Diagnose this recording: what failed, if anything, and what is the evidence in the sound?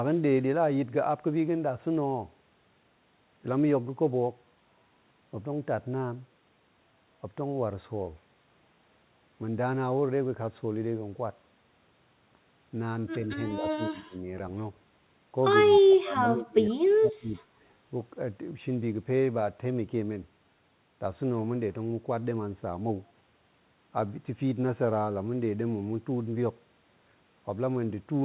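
The echo canceller in the call processing stage likely mistook overlapping talk for loudspeaker echo, causing speech suppressed in double talk. The speech sinks by about 25 dB from 13.57 to 14.16 s, then by about 35 dB from 15.7 to 17.35 s.

An echo leak, likely from incomplete cancellation on the loudspeaker side, lets a faint delayed copy of the speech through from 16.7 to 16.74 s. It trails the original by 111 ms, about 35 dB below the speech, within the narrowband audio that stops at 4 kHz.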